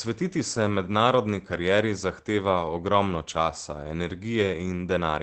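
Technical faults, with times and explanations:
2.61–2.63 s and 4.41–4.43 s: lost packet rebuilt from error correction. Each time a single 20 ms packet was lost, and the Opus decoder played the low-bitrate copy carried in the next packet. There is no gap, just a brief rougher, noisier patch.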